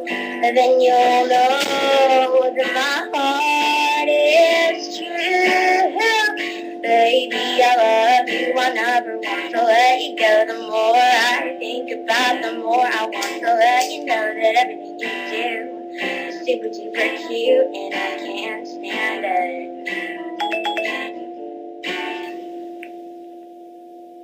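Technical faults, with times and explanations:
22.23 to 24.24 s, pre-emphasis left on: the treble boost that FM transmission applies, the 75 µs curve, was never reversed by the matching de-emphasis, so the highs stay lifted by about 14 dB at 10 kHz relative to 1 kHz. The balance tips sharply upward for these last two seconds. The sound turns thin and glassy, with a harsh, hissy top end and the lower body pushed into the background.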